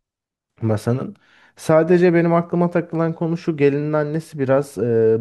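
No technical faults can be heard in the speech recording; the signal holds steady and continuous throughout, with no audible disturbance from the recording or playback chain.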